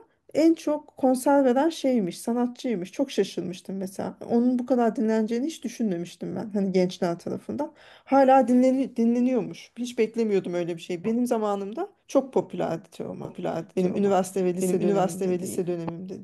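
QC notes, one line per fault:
13.25 s to the end: doubled audio track. A second copy of the speech comes in abruptly and trails the original by about a second. It is roughly as loud as the original. The copy covers the full band and has no decay or room colour, so it doesn't sound like an echo. It sounds like two identical takes talking over each other. This is likely a second capture path or an edit leaving two out-of-step copies in the mix.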